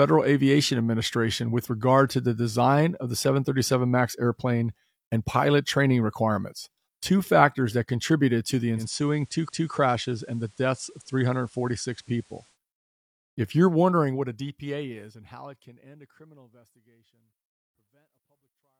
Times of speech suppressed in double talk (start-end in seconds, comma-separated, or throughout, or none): none